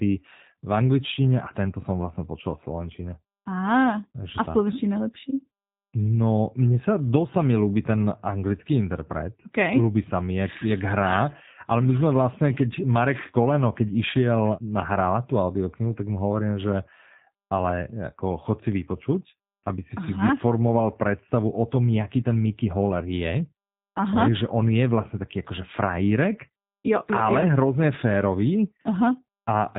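Encoding through the G.729 codec, at what sounds like its 8 kbit/s rate, rebuilds this speech from a filter, pitch predictor and sparse pulses, leaving it band-limited below 4 kHz, rough and synthetic throughout.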